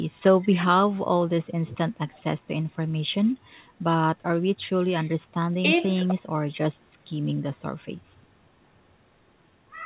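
There are no technical faults to describe in this speech; the narrow call bandwidth, with nothing above 4 kHz, is simply how the call path normally carries it.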